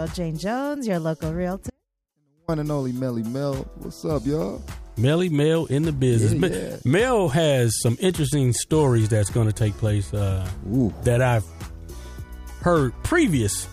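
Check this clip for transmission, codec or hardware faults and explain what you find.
There is one fault, an audio dropout to a faint residue. It runs from 1.7 s to 2.48 s, so the wanted sound is missing for about 0.78 s. The signal cuts out abruptly and returns just as suddenly. In the gap only a faint trace remains, roughly 40 dB below normal level. The likely cause is a brief loss of the feed while the path after the break stayed live and kept passing this weak leak.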